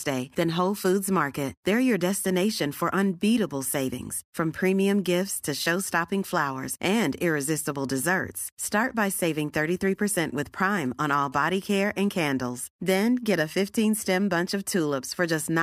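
From 10.77 to 12.28 s, rectified GSM signalling bursts add a galloping 217 Hz tick-buzz, roughly 30 dB down, showing as regular vertical spectrogram stripes.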